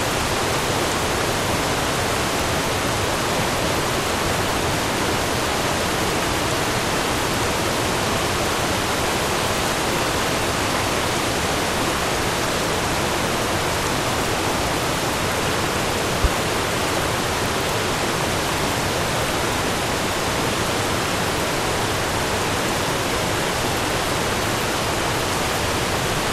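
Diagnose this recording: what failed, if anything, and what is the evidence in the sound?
Loud pop at 16.24–16.28 s: a single sharp pop around 15 dB above the sounds, which carry on underneath. Likely a voltage step from a plug, switch, static or driver glitch.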